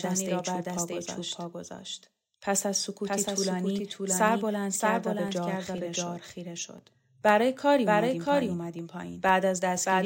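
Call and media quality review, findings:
Doubled audio track, full clip: entire signal heard twice, second copy trailing by roughly 0.7 s and about 5 dB quieter. Full-band, dry, no decay. Likely a second capture path or a misaligned edit holding two copies. Spectrogram shows every speech pattern repeated 0.7 s later, fainter. Waveform shows overlapping envelopes.

Periodic USB or driver dropouts, 0.29 s to 9.79 s: regular ticks every 0.5 s, about twenty in all, audible only over speech. Each is roughly 1 ms replaced by silence as the bus or audio driver stalls on a fixed interval. Waveform shows hairline gaps of silence. Spectrogram shows evenly spaced thin vertical broadband lines.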